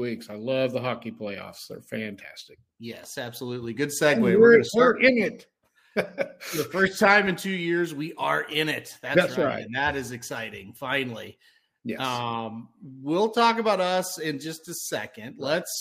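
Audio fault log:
No faults detected; nothing in the audio calls for a log entry.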